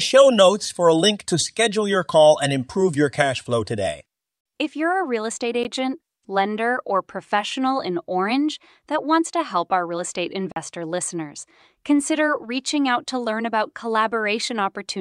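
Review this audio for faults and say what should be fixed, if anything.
Two short gaps in the speech are likely Bluetooth dropouts. At 5.63 s, just after "you're a real estate", the audio cuts out for about 15 ms, which fits one lost packet. From 10.52 to 10.57 s, between "help our real estate" and "listeners consider reaching out", a gap of about 44 ms fits three lost packets. In both, the output falls silent and resumes as though playback had continued, so the missing material is skipped. To prevent it, shorten the transmitter-to-headphone distance, reduce 2.4 GHz interference, or record through a wired path.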